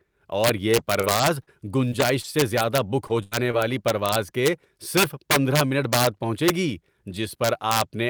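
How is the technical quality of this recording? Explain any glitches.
The recording has two technical faults: integer overflow across the whole clip, and a stretch of repeated packet loss near the start.

The integer overflow runs throughout the speech. Somewhere in the processing chain, a gain or summing stage let the signal exceed the largest value its integer format can hold, overshooting by about 7 dB. Instead of being capped, the excess wrapped around to the opposite extreme. Only a small fraction of samples go over, but each one jumps across the full range. The result is violent, sharp cracks on the loudest moments, harsher and more abrupt than ordinary clipping.

The repeated packet loss (robotic sound) runs from 1.01 s to 3.59 s, ending just before "والی پرواز کے صرف". Audio kept failing to arrive in time, leaving seven holes totalling about 220 ms, the longest 83 ms. Each hole was covered by extending the last received sound, about a fifth of a second of rebuilt audio in all. 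The speech in this span sounds choppy, with brief pieces missing.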